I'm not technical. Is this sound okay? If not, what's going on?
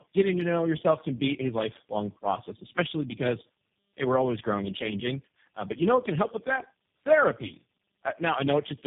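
No. Tandem speech coding runs through the whole clip, from the first second to the last. The sound points to a phone call that crossed about three links, each squeezing speech with its own speech coder. At every handover the speech was unpacked and squeezed again, so each coder worked on the previous one's damage. The result is rougher, noisier, muffled and warbly speech, with nothing above 3.6 kHz.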